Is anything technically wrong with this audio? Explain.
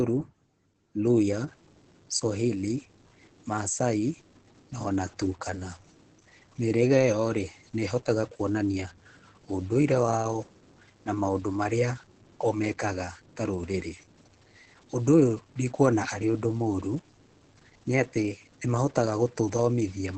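Yes. The speech is heavily damaged by Opus voice compression from start to finish, and from 1.48 s to the end a stuck bit adds distortion.

The Opus voice compression is in SILK mode at wideband, at roughly 10 kbps in 20 ms frames. At that rate the linear-prediction coder can only code the excitation coarsely, and the band is cut off, so nothing survives above about 8.3 kHz. The speech sounds muffled, hoarse and slightly robotic. A spectrogram shows a flat ceiling near 8.3 kHz with smeared, blurry harmonics below it.

From 1.48 s onward there is distortion, and the pauses are filled with hiss instead of silence. The likely cause is a stuck bit: one bit of each sample is held at a fixed value, so about half the samples are shifted by that bit's weight, following the waveform. On a waveform plot the gaps show a constant noisy floor, and the spectrogram fills with broadband noise throughout.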